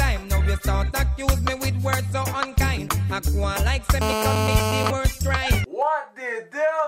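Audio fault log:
4.01–4.91 s, GSM phone buzz: a hard, raspy buzz at 217 Hz with a dense stack of harmonics cuts in, holds steady for just under a second at about 2 dB below the program level, then stops. It has no relation to the underlying sound. The steady character fits a nearby 2G handset on a call: its transmitter pulses 217 times per second, and the audio circuitry rectifies those radio bursts into an audible square-edged tone.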